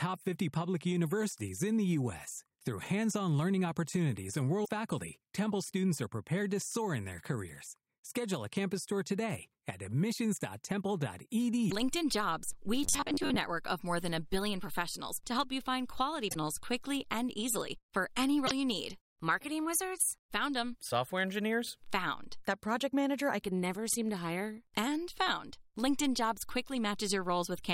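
Speech with two kinds of fault. Damaged data in a compressed stream produces brief glitches at 4.61–4.69 s after "on learning opportunities and", 11.67–11.72 s, 16.26–16.36 s between "to help you find" and "quickly and easily for", and 18.43–18.52 s. From 12.84 to 13.36 s, just before "network of more than", a rigid metallic buzz at 93.8 Hz follows the speech with about half of it lost. This is robotic sound, likely from repeating short buffers of about 10.7 ms, and the steady fixed pitch sets it apart from codec warble.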